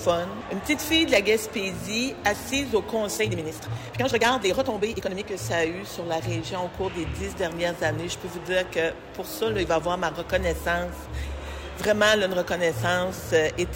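From 3.15 to 5.29 s the sound suddenly rushes ahead at about 1.93 times its pace, yet its pitch never rises. This is a time-stretched section, likely software squeezing the passage to fit a length by dropping short pieces.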